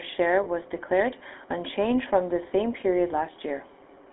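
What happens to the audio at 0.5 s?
Just before 0.5 s, from 0.44 to 0.47 s, lost GSM frames occur: the decoder repeats the last good frame, giving a brief rough, metallic ring consistent with a single dropped 20 ms frame. Underneath, the GSM full-rate codec is audible throughout, with a buzzy, gravelly texture and sound confined to about 250 Hz to 3.5 kHz, consistent with 13 kbps coding.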